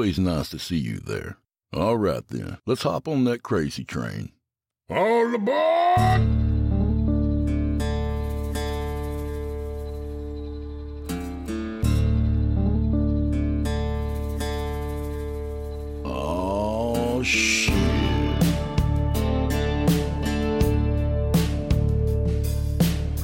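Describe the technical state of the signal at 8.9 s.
At 8.9 s the signal is intact, with no dropout, distortion, glitch or other fault at that point.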